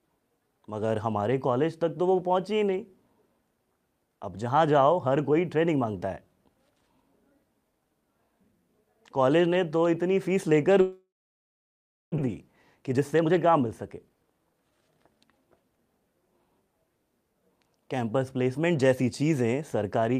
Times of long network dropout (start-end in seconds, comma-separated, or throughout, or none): 10.81-12.28